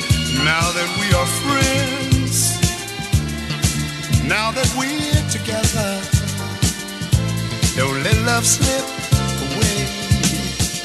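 No technical faults are audible.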